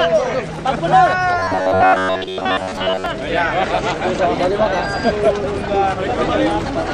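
Audio likely arrived too seldom from 1.39 to 3.06 s, so a stretch of about 11 ms was repeated in place of most of the real sound. The result is robotic sound from repeated short buffers: a rigid, metallic buzz at 93.8 Hz.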